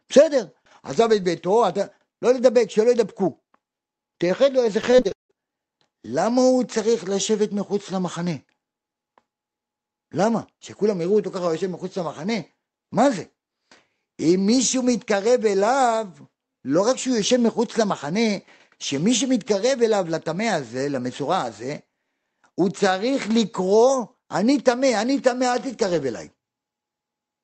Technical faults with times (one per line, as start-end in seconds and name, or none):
4.81-5.31 repeated packet loss (robotic sound)